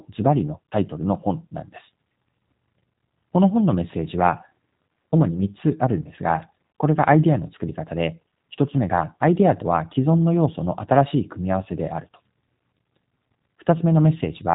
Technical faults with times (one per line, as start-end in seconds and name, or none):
0.00-14.55 G.729 codec